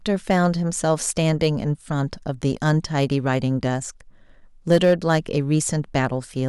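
A gain stage in this speech clip is driven past its ceiling, causing hard clipping: peaks are sliced flat, adding high harmonics. It crackles briefly from 0.30 to 0.46 s at about 2 dB over, then fuzzes more harshly from 4.71 to 5.17 s at about 5 dB over.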